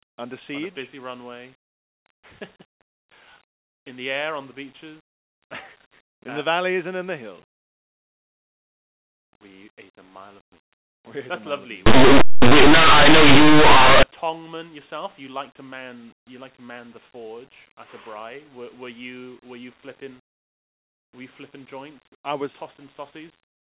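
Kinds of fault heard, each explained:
Linear audio read as companded: from 11.86 to 14.03 s, plain linear 8-bit samples are decoded as though they were mu-law codes. Small values just to one side of zero expand into near-maximum outputs while their mirror values stay tiny, so the speech collapses into loud, harsh distortion. On a waveform the section stands far above the surrounding speech with a lopsided envelope. A spectrogram shows dense broadband energy filling the band to its top.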